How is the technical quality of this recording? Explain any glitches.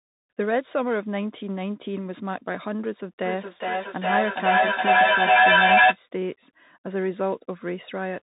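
Technical quality is poor, with two audible faults.

Bluetooth CVSD headset codec, throughout: the speech passes through the narrowband headset link, where one bit per sample only nudges the level up or down with an adapting step. Nothing above 3.8 kHz survives, s sounds turn scratchy, a granular hiss sits underneath, and the damage fits a 64 kbps link.

Feedback echo between two devices, from 3.25 to 6.0 s: a second device in the same room replays the call, and this microphone captures it again, beyond the reach of any echo canceller. Each word returns about every 0.4 s, thinner and more ringing, peaking about 10 dB above the speech as repeats pile up.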